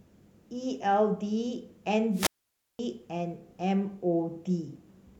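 Speech with a wireless microphone squelch dropout from 2.12 to 2.79 s: a brief surge of hiss as the radio signal fades, then the receiver's squelch mutes the output for about 0.53 s. The waveform shows a flat gap, and the spectrogram shows broadband noise before a blank band.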